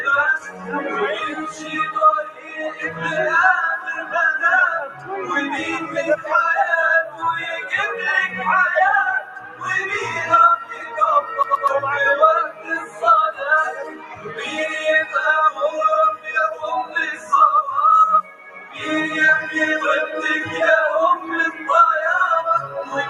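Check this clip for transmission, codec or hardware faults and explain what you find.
Yes, there are faults: a speech-oriented noise suppressor is running over the whole clip, it audibly cuts several passages, and there is one brief CD-style skip.

A noise suppressor applied to music or sounds is active throughout. It treats sustained, steady material as background noise and pulls it down, swinging gain by roughly 15 dB. Transients pass while held sound and tails sink, giving a pumping, thinning quality. On a waveform the envelope breathes unnaturally after each attack. A spectrogram shows sustained bands fading or flickering rather than holding steady.

The suppressor cuts sound most heavily at 0.39–3.01 s (deepest drop about 13 dB), 4.01–7.23 s (about 9 dB), 9.2–9.67 s (about 12 dB), 10.67–10.94 s (about 9 dB), 12.48–18.82 s (about 13 dB, the longest stretch, with around three seconds affected), 21.19–21.63 s (about 7 dB) and 22.66–22.93 s (about 8 dB). 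Decays are chopped short, and the waveform shows sudden notches in the envelope. The spectrogram shows holes and premature cutoffs in otherwise continuous energy.

A CD stuck on one turn appears from 11.43 to 11.68 s. A 124 ms slice of audio plays twice in a row, as when a laser jumps back a track at a scratch, with a tiny mute at each jump. It sounds like a quick stutter. On the waveform the same short segment repeats with a small gap at each seam. The spectrogram shows identical repeated blocks separated by thin vertical breaks.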